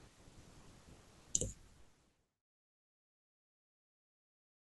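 Nothing in the signal is technically at fault: the speech is intact and then eases gently down in an ordinary editorial fade-out, starting at about 1 s and complete by 2.5 s, with no click or hard edge.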